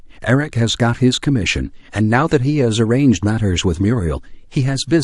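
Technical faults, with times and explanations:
1.46 s to the end, adaptive stream at a lower bitrate: codec artefacts suddenly rise with no gap, which fits a switch from about 128 to 48 kbit/s MP3.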